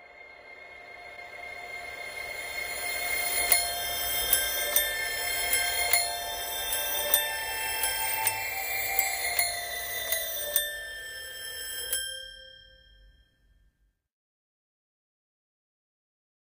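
At 1.16 to 1.18 s there is a corrupt frame decoded: a short run of compressed data, apparently a few consecutive frames, arrived with flipped bits, and the decoder played it anyway. Misread gains and codes put energy at frequencies the sound never had, producing a brief chirpy blip that peaks around -35 dBFS. On a spectrogram it appears as a narrow vertical smear of out-of-place energy lasting about 22 ms. The waveform shows a small, ragged burst there.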